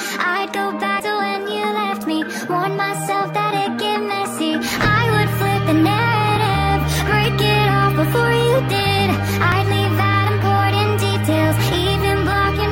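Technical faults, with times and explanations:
1.00 s, dropped buffer (overrun): a jump with the sound skipping ahead about 70 ms and no gap. The hardware likely overwrote samples before they were read, joining both sides directly.
6.36 s, 7.25 s, 9.52 s, dropped buffers (overrun): shorter jumps, each a skip of about 20 ms with no silence. These likely come from buffers overwritten before collection and spliced together.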